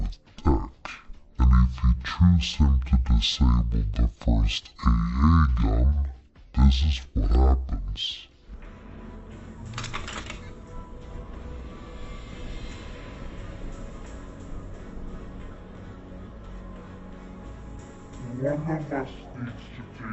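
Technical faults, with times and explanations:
Throughout, stereo read as mono: left and right samples are taken in turn as one channel, so everything plays at half speed and a full octave low. Unlike a simple sample-rate mismatch, a fainter mirrored copy also sits in the upper half of the spectrum.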